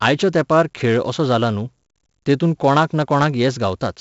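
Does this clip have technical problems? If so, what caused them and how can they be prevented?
Yes. Throughout the speech, a gritty hiss rides on every loud syllable and rises and falls with the level, and sharp consonant onsets come out distorted. Nothing reaches above about 7.7 kHz, so the top end is dull. This is heavy 4-bit ADPCM compression: each sample is coded as a coarse 4-bit step from a prediction, and the adaptive step size lags behind sudden attacks. The sound fits a 64 kbps stream at a reduced sample rate. To prevent this, record and store the speech as 16-bit PCM or with a modern perceptual codec at a full sample rate.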